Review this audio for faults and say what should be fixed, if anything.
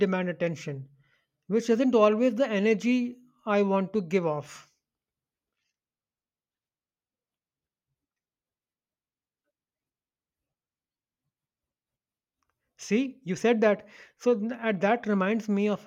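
Nothing here needs fixing; no faults can be heard.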